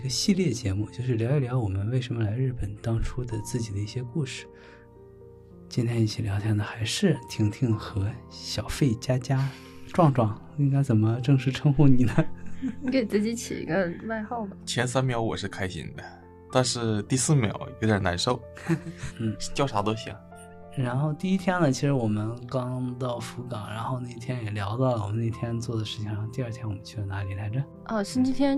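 No technical faults are audible.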